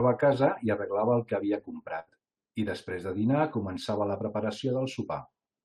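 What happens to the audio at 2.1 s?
A burst of packet loss hits just before that point, from about 1.99 to 2.09 s, right after "arreglava el que havia". Several consecutive packets never arrived in time, so the receiver stretched the last received sound across the hole for roughly 77 ms while fading it down. That concealment is heard as a brief held, decaying tail, and then the audio picks up at "i després de dinar" with about 80 ms of the original simply gone.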